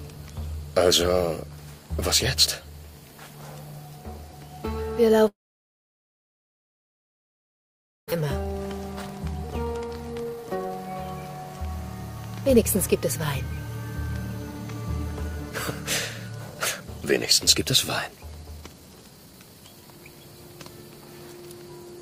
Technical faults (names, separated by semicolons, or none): long network dropout; jitter buffer speed-up